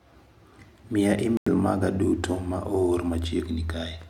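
At 1.37–1.48 s the speech drops to silence with abrupt edges, likely a Bluetooth dropout. Unlike a stall, it resumes further along.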